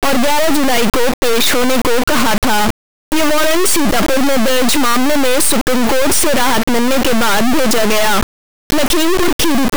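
An integer read as float fault runs through this whole speech clip: samples stored as 32-bit integers are decoded as 32-bit floats. Most bit patterns then land near zero or far past full scale, so the output slams between silence and clipping, a harsh, extremely loud square-wave buzz that falls silent in the quietest passages.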